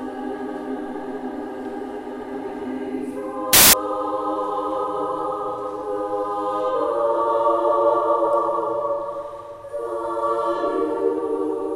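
A wrong sample width fault hits the audio from 3.53 to 3.73 s: 16-bit samples read as packed 24-bit give harsh noise, the sound buried and running 1.5 times fast.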